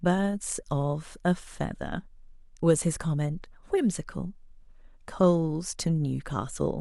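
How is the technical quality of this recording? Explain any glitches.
No glitches or technical faults can be heard anywhere in the recording.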